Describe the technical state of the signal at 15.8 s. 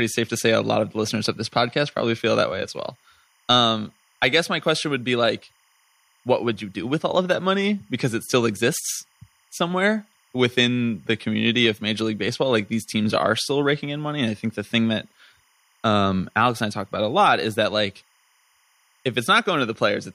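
At 15.8 s a faint, steady chirping warble sits behind the speech, as it does throughout the clip. This is timecode bleed: 25-frame linear timecode leaking from a neighbouring track or cable, its square wave flipping between roughly 1 and 2 kHz, about 40 dB below the speech.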